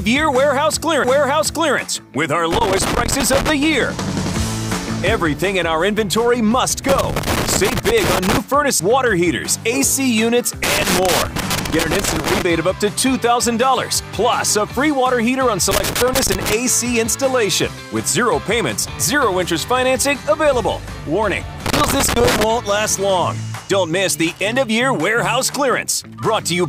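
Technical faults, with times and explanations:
1.04 s and 8.80 s, CD skip: a tick and an extremely short mute, then the sound resumes from another spot as the laser jumped tracks on the disc's spiral.
2.53–3.50 s, 6.89–8.38 s, 10.64–12.42 s, 15.71–16.53 s and 21.66–22.44 s, loose connector crackle: irregular bursts of scratchy crackle as a faulty contact rapidly broke and remade the signal path.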